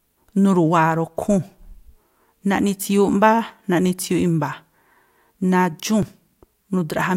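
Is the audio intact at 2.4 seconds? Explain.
Yes, the audio at 2.4 seconds is intact, with no dropout, click, distortion or other fault at that moment.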